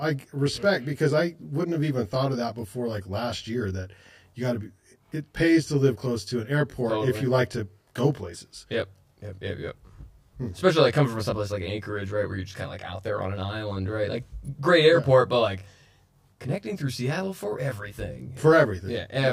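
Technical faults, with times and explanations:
Throughout, channel delay (comb filtering): one channel lags by around 20 ms before mono summing, cutting fixed notches from around 20 Hz upward. Unlike echo or reverb, there is no separate repeat, only a rough, slightly doubled tone.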